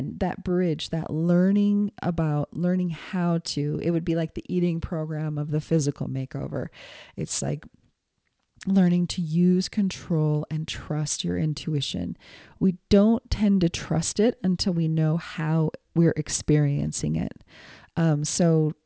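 Speech runs for the whole clip with aliasing. Sibilants sound gritty and metallic, and the top of the spectrum is dense right up to about 8 kHz. The fold point suggests a drop from 48 kHz to 16 kHz with no anti-aliasing filter first. Energy above 8 kHz was not removed, so it mirrors back below that edge as unrelated tones. The folded content sits around 20 dB under the speech.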